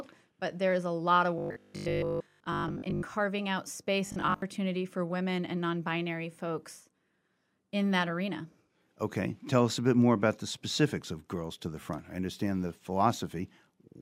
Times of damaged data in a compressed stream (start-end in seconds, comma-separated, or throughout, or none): none